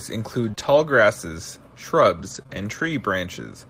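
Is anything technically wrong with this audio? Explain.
Yes. Between about 0.47 and 2.89 s the speech has scattered short gaps: what sounds like four or so tiny dropouts, none longer than roughly 20 ms, adding up to about 80 ms of missing audio. Each hole gets patched by carrying the previous sound forward and blending back in, so the repair spreads over a bit more time than the loss itself. You hear brief ticks, little smears and hiccups rather than outright silences.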